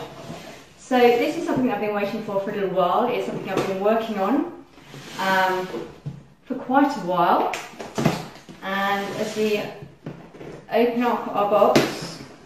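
No technical faults can be heard anywhere in the audio.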